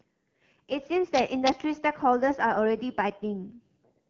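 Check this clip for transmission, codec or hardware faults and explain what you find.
One fault runs through the whole clip: the speech passes through an AMR wideband (HD Voice) codec at a low rate, which fits about 8.85 kbit/s. The vocal tract model gets too few bits for its pulse excitation, so the speech sounds rough and raspy. On a spectrogram, energy stops near 6.9 kHz, and the top band looks like smeared noise rather than harmonics.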